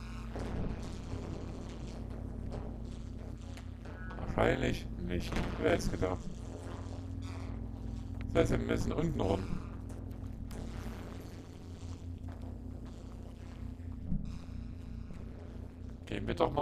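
From start to finish the sound carries overlap-add ripple. It was chopped into windowed frames and stitched back together with an overlap that doesn't add up to a steady gain, so the level dips and swells once per frame. Here the swing is huge, about 60 dB, and it cycles at around 150 Hz. That's fast enough that it stops sounding like a wobble and comes across as a metallic buzz with extra tones around each note laid over everything.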